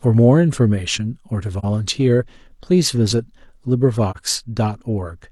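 Speech with two short AAC frame loss with muting dropouts, at 1.59–1.65 s and 4.11–4.17 s. Each brief dip lasts roughly 43 ms, pointing to one lost frame zeroed by the decoder. On a spectrogram it appears as a full-band vertical gap; the waveform envelope dips smoothly and back.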